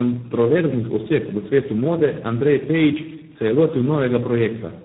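Throughout, the call passes through tandem speech coding: three low-rate codecs in a row, consistent with iLBC, G.729A and G.726, each re-encoding the previous one's output. The errors compound, so the speech sounds rough, muffled and warbly, with nothing above 3.9 kHz.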